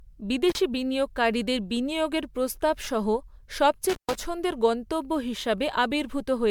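Right from the start the whole clip has a swirly, hollow, smeared quality, with softened consonant attacks, and it sounds worse than a single decent MP3 would give you. Nothing is left above 19.9 kHz. That points to generation loss, likely from the speech being decoded and re-encoded around seven times at something near 134 kbit/s, each pass requantising on a shifted frame grid so the noise and spectral gaps stack up.

At 0.49 to 0.58 s there's an intermittent contact fault. A brief crackle is followed by a dropout of about 34 ms where the signal simply vanishes to faint hiss, then another crackle as it reconnects just before "বিনিয়োগকারীদের বিনিয়োগের প্রস্তাব সহ". It's the classic sound of a loose plug or cable briefly opening the line.

The same intermittent contact fault comes back at 3.89 to 4.15 s, and this time the gap is longer, about 125 ms. The sound cuts out with crackly edges on either side, leaving only a thin bed of hiss while the connection is open, before the signal snaps back in.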